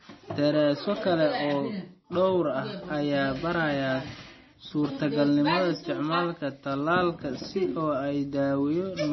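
Throughout the speech the sound is dull and watery, with nothing above about 5.9 kHz, so s sounds lose their edge and turn into swirling, metallic chirps while consonant attacks smear. The likely cause is heavy MP3 compression at a low bitrate, one that fits about 24 kbps. Short of bits, the encoder cuts the treble at a fixed point and drops weaker frequency lines that flicker on and off between frames.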